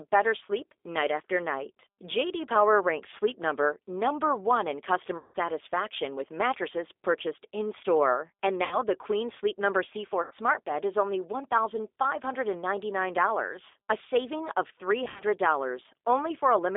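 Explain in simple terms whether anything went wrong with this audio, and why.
The call was carried by the G.729 codec, a low-rate telephone codec that does not send the speech itself. It sends a compact description of it, and the far end rebuilds the voice from that description. Only a narrow band gets through, roughly 300 Hz to 3.6 kHz, so the speech sounds thin and muffled. The rebuilding is plainly audible throughout, giving the voice a slightly rough, artificial, buzzy quality.

There is also VoIP packet loss concealed by the speech codec. Chunks of the call went missing on the network, and the decoder filled each gap by continuing the last sound it had and fading it out. This happens at 5.18 to 5.36 s (about 160 ms missing), 8.65 to 8.76 s (60 ms), 10.23 to 10.34 s (80 ms), and 15.04 to 15.23 s, where 120 ms was lost in scattered bits. Each gap comes out as a smeared, buzzy or hollow stretch that dies away, and the voice sounds weak for a moment after it.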